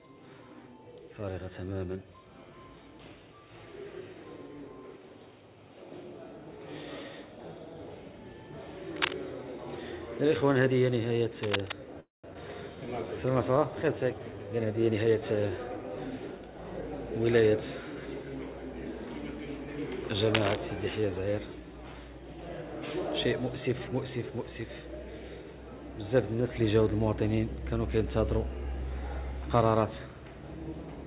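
From 8.96 to 9.13 s and again from 11.43 to 11.72 s, a dense, uneven scratching rustle sits on top of the sound at about 5 dB above it. This cable scratch noise is likely a worn cable, connector or control being moved, so its contact resistance jumps about rapidly and injects bursts of noise.

At 12.00 s the audio freezes: the last sound carries on briefly as a fading buzz or hiss, then drops to about 150 ms of silence before resuming at 12.26 s with nothing lost. This call audio freeze likely comes from packets held up in transit, emptying the jitter buffer, so a 236 ms gap is inserted into the stream.

Between 12.34 and 12.37 s playback skips ahead. Roughly 150 ms of audio vanishes and the two sides are butted together almost directly. Later packets were already queued when that stretch was dropped, either on the way or by the jitter buffer overflowing.

From 12.75 to 14.37 s the sound drags at the same pitch, running at 91% speed with stretched sounds. 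This jitter buffer slow-down comes from the receiver repeating single pitch periods and bits of pauses to rebuild its reserve, adding 156 ms in total.

From 14.86 to 16.82 s the opposite happens. The audio hurries at 112% speed without any pitch change. In this jitter buffer speed-up, the buffer held more than its target, so the receiver cut out short pitch-period pieces again and again, removing about 200 ms.

From 20.34 to 20.56 s a third burst of cable scratch noise appears, this time at about the same level as the sound itself. Throughout, the band stops at 4 kHz, which is the G.711 mu-law call path working as expected.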